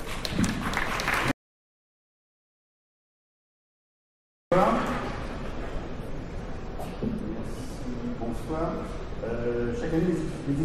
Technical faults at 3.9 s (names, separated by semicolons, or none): audio dropout to silence